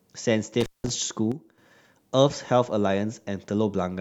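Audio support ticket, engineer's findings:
Intermittent contact, 0.61–0.90 s: speech cuts out for about 180 ms, crackle at both edges. Loose plug or cable opening. Waveform shows a near-flat gap flanked by sharp spikes.

One channel drops out, 1.32–1.58 s: level falls abruptly by about 6 dB, then returns. Likely a lost stereo leg before mono summing. Waveform envelope steps down and back.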